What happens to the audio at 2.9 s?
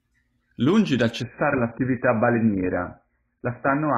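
At 2.9 s the sound is inside a stretch of adaptive stream at a lower bitrate, running from 1.22 s to the end. The stream switched abruptly, with no gap, to a far leaner encode, likely around 12 kbit/s, and nothing above 2.5 kHz remains.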